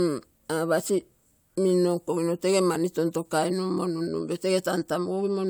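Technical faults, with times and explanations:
No technical faults detected anywhere in the speech recording.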